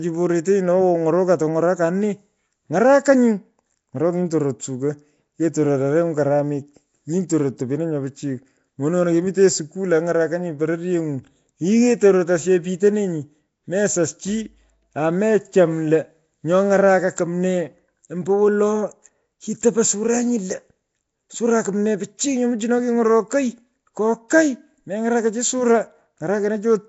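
From start to finish, the speech carries a rough, hissy halo and a smeared, underwater quality. Nothing sounds above about 7.7 kHz. The likely cause is Nellymoser compression, coarse block coding that starves weak bands and fills them with noise. The damage points to roughly 32 kbps.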